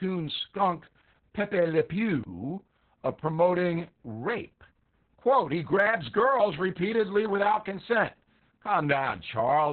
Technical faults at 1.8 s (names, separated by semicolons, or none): Opus voice compression